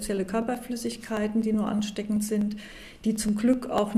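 Periodic USB or driver dropouts run from 0.17 s to 3.91 s, about thirty regular ticks spaced 0.124 s apart. At each one, well under a millisecond of audio is skipped outright as a background task stalls the driver or bus, leaving a small click in the sound.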